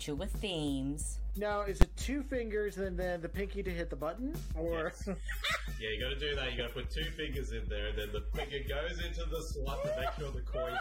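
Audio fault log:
1.82 s, invalid numbers at full scale: a calculation overflowed into infinite or invalid values, which were clamped to the largest possible sample value for a block of about 10 ms. The output sits flat at one extreme value, far beyond the audio's peaks, so it is heard as a single sharp, very loud bang.
4.58 s to 10.80 s, adaptive stream at a lower bitrate: the connection slowed and the player switched to a much leaner encoding, which fits a drop from roughly 96 kbit/s to 24 kbit/s AAC. The quality drops abruptly and codec artefacts rise. The change comes without any gap.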